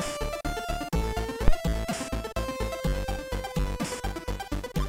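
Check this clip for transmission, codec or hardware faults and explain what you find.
One hardware fault stands out. A phantom power thump occurs from 1.48 to 1.57 s. A supply switching on or off on the live input sends a voltage step through the coupling capacitors. It comes out as a deep thump peaking near about -8 dBFS, decaying within 21 ms.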